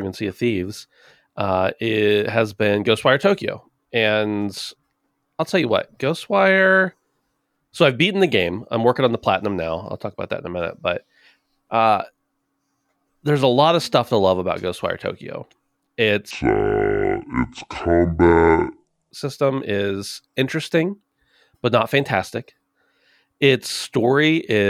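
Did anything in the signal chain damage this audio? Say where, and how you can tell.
Yes: a section at the wrong speed, from 16.31 to 19.11 s. For those 2.8 s the speech runs at 0.575 times its recorded rate, slowed and dropped around ten semitones, with pitch and tempo falling together. Normal speed returns abruptly at "system is interesting". The damage was likely done at the editing or playback stage, where one stretch was clocked against the wrong sample rate, so the samples were read out too slowly.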